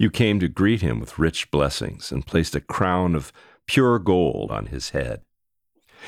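No technical faults can be heard in this recording.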